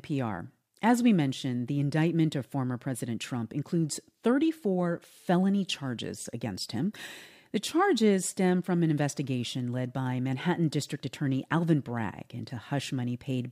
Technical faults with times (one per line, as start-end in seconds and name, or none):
none